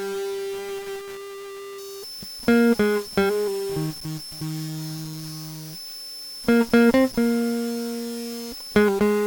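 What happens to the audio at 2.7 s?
A switching supply whistle runs from 1.78 s to 8.85 s, covering 2.7 s. A power supply's audible switching puts a thin high tone near 5.2 to 5.3 kHz over the music, about 20 dB down.

Under it, low bit depth without dither persists throughout. The music sounds grainy, with a gritty error that tracks it, roughly 20 dB below. This is likely from truncation to about 6 bits.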